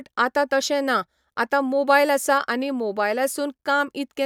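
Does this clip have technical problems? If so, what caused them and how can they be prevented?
No, nothing in this speech recording points to a technical problem, so there is no cause to trace and nothing to prevent.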